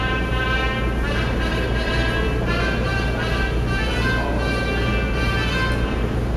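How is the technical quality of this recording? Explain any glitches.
The technical quality of this recording is sound, with no glitches to explain.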